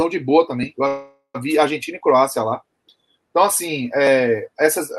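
A call audio freeze interrupts this audio from 0.87 to 1.36 s. The last sound is drawn out as a fading buzz for about 470 ms, with roughly the final 100 ms silent, and the audio then resumes where it left off with nothing lost, only delayed. The likely cause is late packets draining the jitter buffer. On a spectrogram the stretch shows as smeared, repeating bands fading to a blank strip, and the waveform shows a decaying envelope before a flat gap. The call codec's upper limit appears near 12 kHz.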